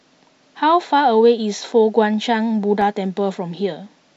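A scratch on the disc defeats the player's error correction once per revolution, so it patches or mutes the damaged samples. Between 2.54 and 2.82 s the speech carries CD scratch ticks: three sharp clicks, each under a millisecond, repeating about seven times a second.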